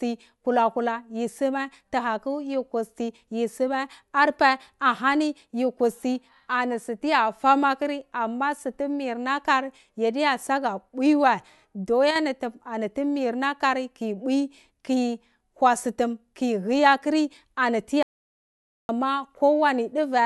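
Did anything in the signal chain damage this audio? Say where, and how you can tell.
Yes. From 12.11 to 12.16 s, just before "ni ani tu mirnar", the level briefly sags by about 6 dB. This is one channel dropping out, likely a stereo channel lost upstream of the mono mix, with the mono sum losing half its common content.

After "aturi ani", from 18.03 to 18.89 s, the sound cuts off into silence for about 0.86 s, with no room tone at all. This is an audio dropout to silence, likely a lost input link or device, while the recorder kept writing silence.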